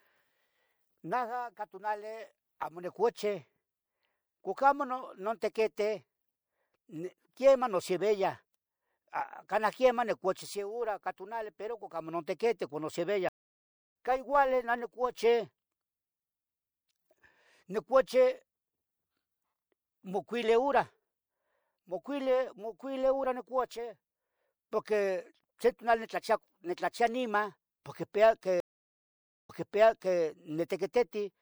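At 13.29 s a stream reconnect cuts the speech to 0.66 s of silence, a flat gap in the waveform, resuming roughly 0.7 s later in the stream. At 28.60 s, after "niman porque icpea", another reconnect leaves 0.89 s of silence, then resends audio from 0.71 s earlier, so speech repeats.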